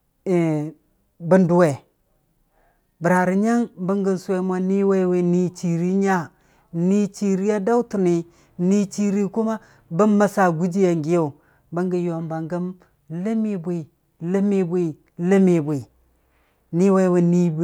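Nothing technical goes wrong anywhere in this bit of speech, so there's no fault to point to.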